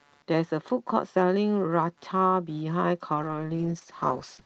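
Right from the start there's computer activity noise sitting under the speech, a faint buzzy chirp pulsing at roughly 150 Hz, somewhere around 40 dB below the talker. It's the classic shared-ground problem: as the processor, graphics card or mouse change their load, the current swings shift the audio circuit's ground. The buzz comes and goes with the computer's activity, not with the speech.

At 3.14 s there's a call bitrate drop that lasts to the end of the clip at about 4.46 s. The speech up to that point has the slightly band-limited sound of Opus topping out around 8 kHz, which fits a call path at roughly 32 kbps. After the drop, the sound goes rough and watery and a bit muffled for the last 1.3 s. That points to the bandwidth estimate collapsing and the encoder being squeezed down to around 8 kbps, so it codes much more coarsely and the highs thin out.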